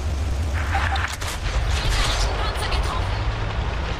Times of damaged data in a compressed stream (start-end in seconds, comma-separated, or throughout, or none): none